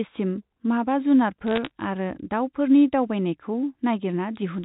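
From 1.48 s to 1.71 s the speech picks up a burst of crackle: bit errors on a digital phone line. Around one bit in two hundred arrives flipped, and each flip corrupts a single 8-bit mu-law sample. When an upper bit, or the sign bit of a loud sample, is hit, the sample jumps far off its true value and produces a sharp tick. The density of ticks fits a dozen or so damaged frames. The G.711 band limit of 4 kHz stays audible through the burst.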